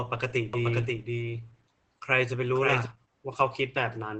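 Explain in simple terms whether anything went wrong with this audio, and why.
Yes, two things went wrong.

The whole recording shows Opus compression damage. The speech sounds muffled and hoarse. Nothing is heard above about 8.6 kHz, so the crisp top end is missing. This is likely a heavy squeeze by the Opus codec into its low-rate speech mode. To save data, it throws away fine detail and high sounds. What remains sounds thin and scratchy.

From 0.53 to 2.85 seconds there is a doubled audio track. A second copy of the same speech plays about half a second behind the first. It is somewhat quieter but just as clear, with no echo tail or room sound. It starts and stops suddenly. A likely cause is the sound being picked up twice, once through a slower path. The two copies overlap and blur together.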